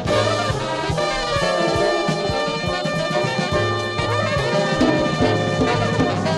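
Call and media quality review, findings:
No audible faults found.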